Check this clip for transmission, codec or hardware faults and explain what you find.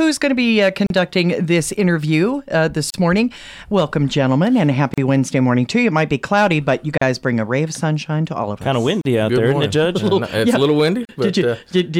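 There's one recurring fault, a gap at a join of encoded pieces, at 0.87, 2.90, 4.94, 6.98, 9.01 and 11.05 s. Each is a hole of about 37 ms, every 2 s, where separately encoded chunks were butted together with their start delay and end padding left in. You hear a brief dropout with softened edges before the sound carries on.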